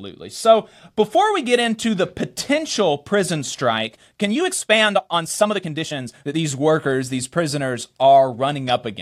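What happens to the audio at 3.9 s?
At 3.86 s the speech abruptly picks up pace and stays rushed until 6.38 s, running at about 1.53 times normal speed while the pitch doesn't budge. That's a time-stretched section, likely from software squeezing that stretch to fit a shorter slot, keeping pitch intact by cutting out tiny slices of the waveform. Those missing slices are why it sounds hurried rather than chipmunk-like.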